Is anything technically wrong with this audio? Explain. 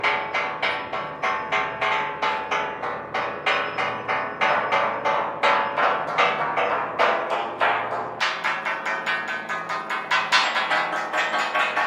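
Yes, two things stand out.

At about 1.91 s there's a quick blip from damaged data in the compressed stream. A bit of the encoded file got corrupted, so the decoder couldn't make sense of the frame there, lost its place and hunted for the next valid frame header. You hear it as a tiny glitch, gone almost as soon as it starts.

From 8.19 s right to the end at 11.86 s, there's a section at the wrong speed. It runs about 1.47 times too fast, which also pushes the pitch up by roughly seven semitones, so everything sounds higher, tighter and hurried compared with the earlier part. The likely cause is that this stretch was played or rendered against the wrong clock, which changes speed and pitch together.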